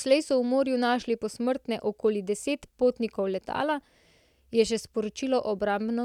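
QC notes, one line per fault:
No technical faults were found anywhere in the signal.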